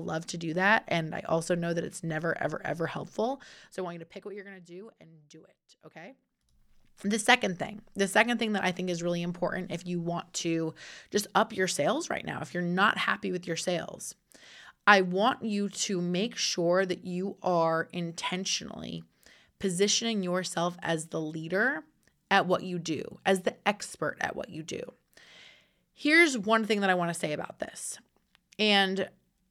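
From 3.07 to 4.64 s, just after "it's never ever ever" and running up to "do and do it", a fine ticking rides on the speech as it fades down by roughly 20 dB, at around ten ticks a second. This is zipper noise: the gain was lowered in unsmoothed 1 dB jumps rather than a continuous ramp, and each abrupt jump leaves a small click, so the fade sounds like a zip being drawn.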